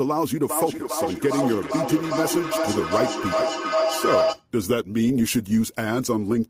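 Feedback howl runs from 0.49 s to 4.47 s. Sound from a loudspeaker is reaching a microphone on the same call and coming back louder each time around, so every repeat adds to the last instead of dying away. The energy gathers into a tone around 700 Hz that swells to about the level of the speech, circling the loop roughly every 0.4 s.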